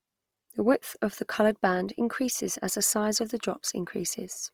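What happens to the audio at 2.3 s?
At 2.3 s the speech sounds rough and grainy, with a noisy, gritty texture in place of clean tones, and this continues through the whole clip. The likely cause is Opus compression in its music mode, which at a rate that fits about 24 kbps fills under-funded bands with noise.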